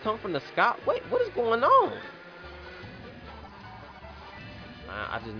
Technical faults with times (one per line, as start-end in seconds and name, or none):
none